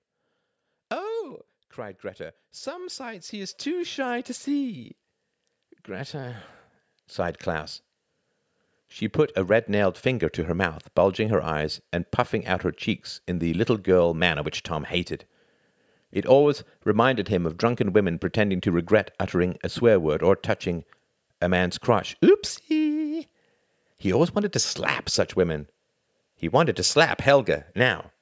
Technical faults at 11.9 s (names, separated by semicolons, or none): automatic gain rising